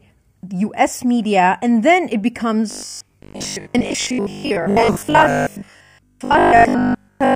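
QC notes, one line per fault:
2.71–7.35 s, robotic sound from repeated short buffers: from 2.71 s to the end the speech becomes a rigid, metallic buzz locked at 50 Hz that still loosely tracks the syllables, likely because audio arrived too seldom and the last 20 ms was looped to fill the gaps, skipping most of the real signal. Unlike a stutter or dropout, there is no audible break or repeated syllable, just a steady pitch imposed by the loop rate.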